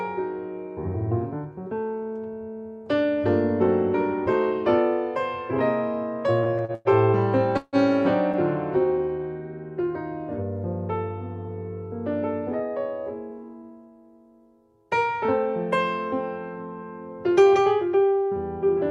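From 6.43 to 6.88 s the audio breaks into repeated stalls (stutter). Four short gaps, the longest 106 ms, are filled by stretching the preceding sound, about 40% of that span. Nothing is lost, but unlike a single freeze it catches again and again.

At 7.57 s comes a call audio freeze lasting about 0.19 s. The last sound carries on as a fading buzz or hiss for roughly 156 ms, ending in about 30 ms of silence, then resumes where it stopped. This was likely packets held up in transit, draining the jitter buffer in one wait rather than many.

Between 8.98 and 9.24 s a jitter buffer slow-down repeats small pitch-period slices to rebuild the buffer's reserve, adding 46 ms. The audio runs at 86% speed with unchanged pitch. It sounds drawn out rather than broken, with no gap or fade as in the stalls.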